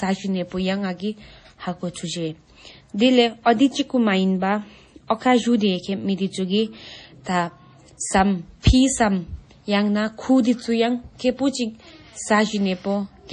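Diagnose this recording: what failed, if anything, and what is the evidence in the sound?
The speech throughout has nothing above 10.5 kHz and a heavy watery, swirling texture, with weak detail flickering in and out. That points to the codec stage, likely MP3 compression at a low bitrate near 32 kbps. The flickering artefacts set it apart from a plain low-pass filter or a narrowband line.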